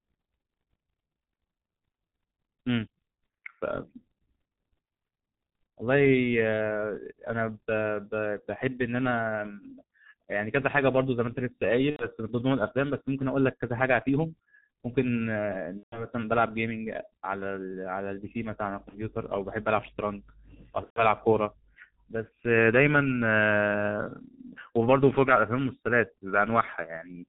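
From the start, the speech carries the heavy damage of the G.723.1 codec. The muffled, hoarse quality and smeared consonants point to a rate near 6.3 kbit/s. Nothing reaches above 4 kHz, and the slowly updated voice model blurs rapid transitions. A simple low-pass filter would dull the top end but leave consonant timing crisp. Here the roughness and blurring sit inside the band too, which marks a low-rate speech codec rather than filtering alone.

VoIP packet loss concealed by the speech codec then appears four times: 11.90–12.08 s, 15.77–16.06 s, 18.89–19.09 s and 20.84–21.08 s. At each point the decoder had no incoming data and kept extending its last pitch and filter. It lowered the gain as it went, so the sound stretches into a fading buzzy tone or coloured noise. The missing stretches fit about 90, 150, 30 and 120 ms. The weakened, distorted sound runs past each gap, which is why the marked spans are longer. 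A plain dropout would cut to silence. This one fills the gap with a decaying synthetic continuation instead.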